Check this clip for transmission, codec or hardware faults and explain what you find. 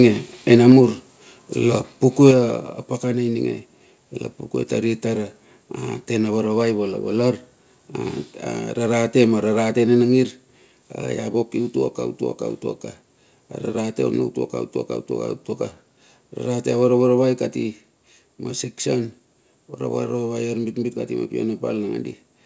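Two kinds of fault are audible in this speech clip: the microphone overloads twice, and its input volume is stepped down three times, with the first two steps following the distorted peaks.

Microphone overload, 0.51 to 0.78 s and 2.25 to 2.30 s: the input gain was likely set too high, driving peaks about 3 dB and then about 2 dB past the converter's ceiling. A small share of samples is clipped, roughly 1.5% in the first burst and around 3% in the second. The flattened waveform tops add a harsh, crackly edge to the loudest syllables.

Microphone volume stepped down, at 0.72, 2.31 and 10.02 s: the call software likely reacted to the hot input by lowering the device gain in single steps of about 2 dB, about 4 dB, and about 2 dB again. The voice and room sound drop in level abruptly at each point. The first two drops come right on the heels of the clipping, and the one at 10.02 s has no audible overload before it. 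Throughout the clip the call codec's band limit is audible, with nothing above 8 kHz, which fits G.722.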